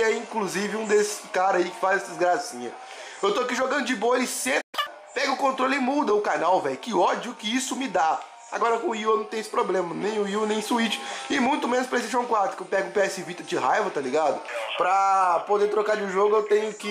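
At 4.61 s the sound cuts out abruptly in mid-flow. This is a playback stall. Output stays silent until 4.75 s, a gap of about 120 ms. The audio then resumes rather than being lost. The likely cause is a player that ran short of data, or whose audio thread was briefly blocked. While it waited, nothing reached the output. The break is short but clearly audible as a hole.

Right after the gap, from 4.75 to 4.87 s, comes catch-up at higher speed. The player works through its backlog at twice normal speed by resampling. Because it resamples instead of time-stretching, pitch rises along with speed. The sound jumps up by roughly ten semitones and hurries along. It lasts about 120 ms. Then speed and pitch snap back to normal.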